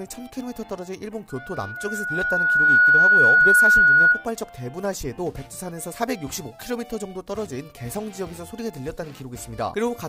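From about 1.3 s to 4.26 s there's a loudspeaker feedback squeal. A mic was evidently hearing the speaker it feeds, and at 1.5 kHz the loop gain tipped past one, so that frequency kept reinforcing itself. You can hear a pure tone creep in and swell over roughly a second and a half until it sits around 15 dB above the rest of the sound, then it cuts out at 4.26 s once the loop is broken.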